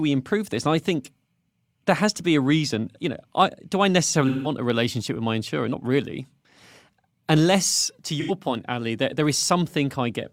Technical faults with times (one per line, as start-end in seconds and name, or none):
0.11-10.31 clock slip clicks
4.27-4.51 AAC frame loss with concealment
8.20-8.31 AAC frame loss with concealment